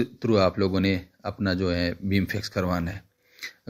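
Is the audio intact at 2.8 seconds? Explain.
No. Between 2.53 and 3.20 s, a few packets arrived late or not at all, producing scattered short gaps. The receiver bridged each hole, around four of them, none longer than about 10 ms, by extending the preceding sound, leaving brief ticks, smears or hiccups in otherwise clear audio.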